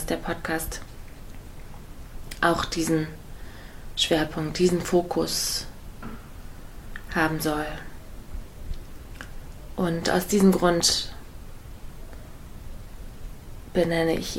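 At 4.85 s, a single compressed frame was dropped, either missing from the file or rejected by the decoder as damaged. Playback jumps ahead by about 30 ms, which fits one 32 ms frame.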